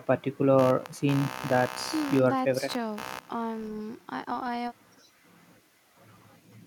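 From 0.58 to 3.68 s there's computer activity noise under the speech, a buzzy, chirpy pulsing around 70 Hz, roughly 15 dB down. Processor or graphics load shifting the shared ground is leaking into the audio, so it follows the machine, not the talker.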